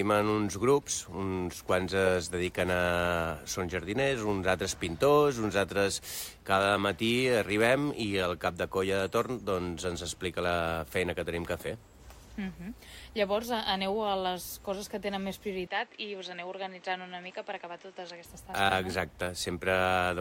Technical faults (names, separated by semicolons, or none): input switched to a poorer device